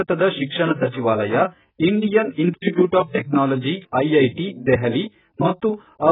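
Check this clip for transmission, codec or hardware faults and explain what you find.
One codec fault runs the length of the clip. AAC compression, throughout: the speech likely went through AAC-LC at a very low rate, around 8 kbps, which strips everything above 3.8 kHz and coarsely quantises the rest, so it sounds dull, smeared and heavily warbly.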